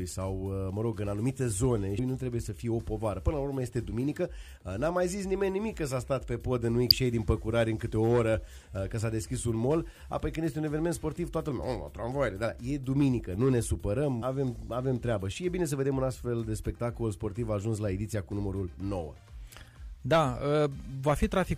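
The audio carries three brief glitches at about 1.98 s, 6.90 s and 14.21 s, each under 20 ms. This is damaged data in a compressed stream, where corrupted frames make the decoder misread them and resynchronise. A clean dropout would instead leave silence or a plain click.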